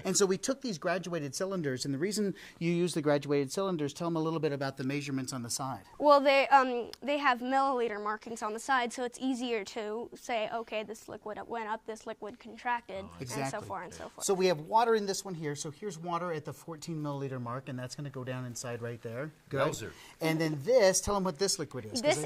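From 4.12 to 6.55 s, sample clock jitter, timing wander of a microsecond or two, adds hiss about 40 dB below the signal that tracks steep, loud, bright passages.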